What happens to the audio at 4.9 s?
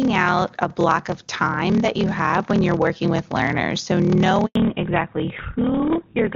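At 4.9 s the audio is inside a fallback to narrowband that starts at 4.55 s and runs to the end. The call drops from HD Voice to an older codec, consistent with GSM full rate, so everything above 4 kHz vanishes and the speech turns duller and rougher. A block size mismatch (padded) also runs throughout: short blocks are zero-filled to the reader's size, which fits 1024-sample writes, producing a 38.3 Hz buzz and playback slowed to 0.889 times speed at about normal pitch.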